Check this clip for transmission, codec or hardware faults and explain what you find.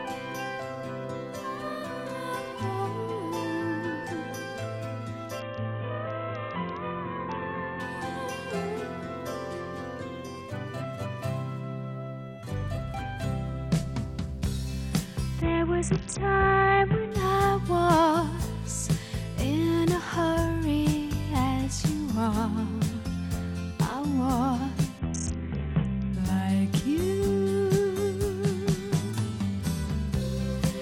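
Three Bluetooth SBC bit pool drops occur, at 5.40 to 7.80 s, 15.42 to 17.11 s and 24.99 to 26.13 s. A congested link forced the encoder to shrink its bit pool, which fits a fall from 28 to about 6 and roughly 60 kbps. The top sub-bands starve and the rest are coarsely quantised. Treble dulls and gritty noise rises, then clears.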